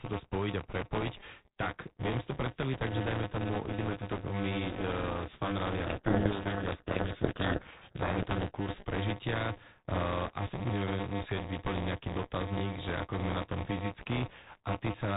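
A speech clip carries buffer tearing from start to finish. A robotic buzz at 200 Hz rides on the speech and falls away in pauses. The writer and reader of the playback ring buffer have slipped. Each 5 ms period therefore splices in a small slice of audio roughly 15 ms old, with hard joins on both sides. From 5.86 to 8.42 s, ending just before "kurz prežitia", there is a codec payload misread. The speech sinks into harsh, grinding distortion. The decoder is reading G.726 code words with their bit order reversed, so every sample is rebuilt from scrambled values. Around this, the band-limited telephone sound fits light G.726 coding, likely at 32 kbit/s.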